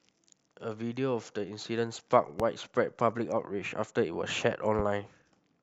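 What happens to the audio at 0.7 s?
Nothing goes wrong at 0.7 s: the speech runs on intact through that moment, with no dropout, click or distortion to be heard.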